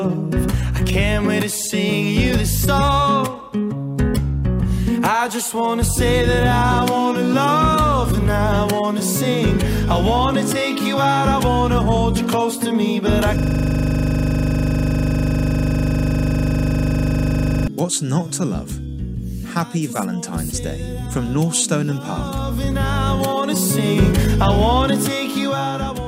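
From 13.39 to 17.68 s, a rasping 25 Hz stutter: a system hang loop, where a frozen driver let the hardware replay one 40 ms buffer over a hundred times.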